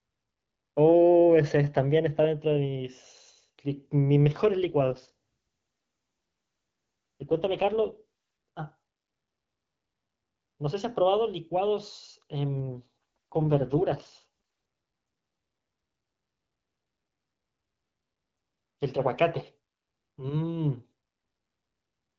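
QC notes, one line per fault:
4.69–8.04 s and 12.60–14.27 s, AMR rate drop: speech turns rough and synthetic with no gap or narrowing of band, which fits AMR-WB falling from 12.65 to 6.6 kbit/s.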